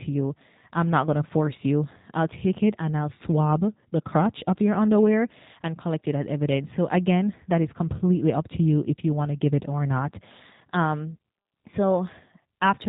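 The speech has passed through a G.729 codec for its full length, and the damage is plainly audible. The encoder replaced the waveform with a vocal tract filter, a pitch predictor and a sparse set of pulses per 10 ms frame, at a rate that fits an 8 kbit/s VoIP stream. Everything above 4 kHz is gone, so the speech sounds muffled and telephone-like, and the rebuilt voicing has a rough, faintly synthetic buzz.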